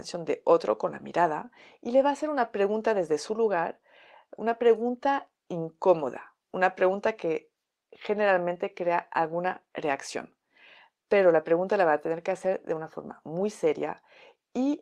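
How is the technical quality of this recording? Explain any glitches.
No technical faults can be heard in the recording. There are no glitches to explain, as nothing interrupts or alters the speech at any point.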